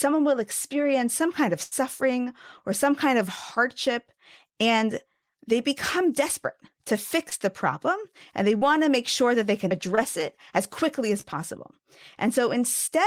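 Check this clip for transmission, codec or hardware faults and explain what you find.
Two kinds of transmission fault are audible, both from packets lost on the way to the receiver.

Burst of packet loss, 1.63 to 1.73 s, just after "experience some kind of": the last sound is stretched into a held, fading tail for about 80 ms, then the speech jumps ahead. The receiver extrapolated across missing packets, so that stretch of speech is gone.

Short concealed packet loss at 7.29, 8.57 (between "the problem and they" and "to make sure that"), 9.95 (between "sure that they can" and "it as quickly as") and 11.21 s: brief smears or wobbles of 20 to 40 ms, where the decoder patched each small gap by continuing the preceding sound.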